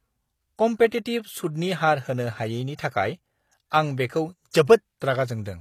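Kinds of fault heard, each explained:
HE-AAC compression: throughout the speech, the treble sounds bright but synthetic, and s sounds come out gritty and lispy. This is likely spectral band replication, which codes only the lower spectrum and copies it upward, fitting a low bitrate around 24 kbps.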